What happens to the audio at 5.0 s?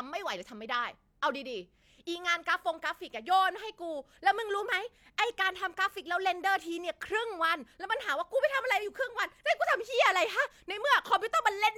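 Nothing goes wrong at 5.0 s; the speech there plays through intact, with no dropout, click or distortion.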